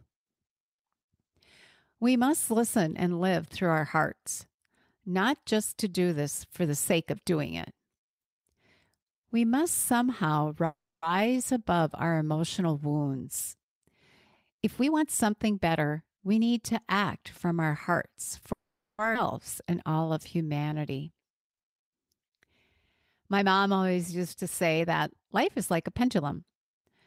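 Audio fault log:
10.65–11.04 s, call audio freeze: after "must somehow" the sound stops and a held-over tail fades to about 280 ms of silence, filling a 0.37 s gap, likely because packets stalled and the jitter buffer emptied. Playback resumes at "above our emotional wounds" with nothing lost, just later.
13.73–13.86 s and 14.51–16.38 s, jitter buffer speed-up: after "above our emotional wounds" the buffer held surplus audio, so repeated pitch-period trims ran the sound at 134% briefly, then 117% up to "need to act from", removing roughly 50 ms and 300 ms. Pitch stays put while pacing sounds hurried.
18.52–19.00 s, call audio freeze: the sound halts and decays into about 440 ms of silence within a 0.46 s gap, likely from delayed packets draining the buffer. When audio returns it continues exactly where it stopped, so the clip is pushed later rather than cut.
19.14 s, skip ahead: playback jumps forward almost seamlessly, dropping roughly 300 ms of audio that was discarded while later material already waited. 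The two edges of the cut are butted together, so a fragment simply vanishes and the earlier lag is partly recovered.
19.72–21.20 s, jitter buffer slow-down: with the reserve running low or the target delay just raised, the receiver repeated single pitch periods and pause fragments, adding 222 ms and slowing playback to 86% at unchanged pitch. Sounds are stretched out, giving a dragging delivery.
24.78–26.85 s, jitter buffer speed-up: the buffer again held more than its target, so short pitch-period slices were cut repeatedly, removing roughly 300 ms and running the sound at 114%. Pitch is preserved, but the rhythm audibly tightens and rushes.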